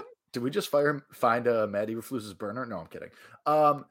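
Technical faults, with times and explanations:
0.25 to 3.78 s, word clock ticks: about fifteen sharp ticks of uneven strength, roughly every 0.3 s, over the speech. The receiving device is running on its own clock instead of locking to the sender's digital link, and the two differ by something like 70 parts per million. Each time they slip a full sample apart, a single sample is dropped or repeated and the neighbouring samples are misread, leaving a tiny discontinuity that sounds as a click.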